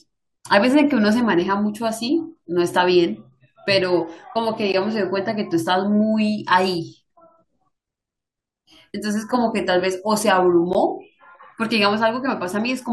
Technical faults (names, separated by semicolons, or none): gap between stream segments